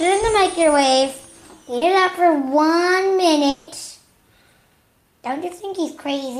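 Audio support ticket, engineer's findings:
Short concealed packet loss, 1.77–1.83 s: brief smear. 40 ms of audio missed decoder deadline; receiver extrapolated the preceding sound, then blended back into real audio.

3.49–3.69 s: 180 ms of continued, fading sound, no silence, audio resumes with that stretch missing. Likely long network dropout; receiver concealment bridged the entire gap.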